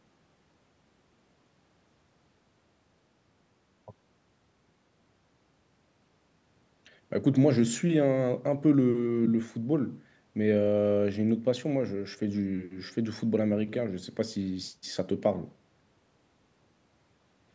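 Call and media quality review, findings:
Nothing stood out on listening; the speech shows only the expected band-limiting of the call microphone processing, with no content above 8 kHz.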